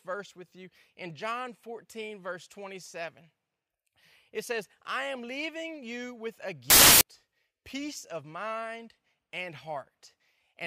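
A speech recording in which, from 6.70 to 7.01 s, the audio collapses into a burst of loud, harsh noise lasting roughly 0.3 s. The fault is samples built from the wrong bytes: for that stretch each sample was assembled with its bytes misaligned or in swapped order, so the rapidly fluctuating low-order bits landed in the high-order position and dominated the value. The result is loud broadband noise.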